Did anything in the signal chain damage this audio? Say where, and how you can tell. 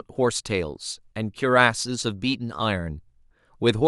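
No, nothing in the signal chain has audibly damaged this speech recording: there is no sign of trouble at any stage from capture to playback.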